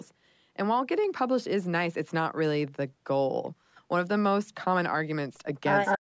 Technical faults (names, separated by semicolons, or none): echo leak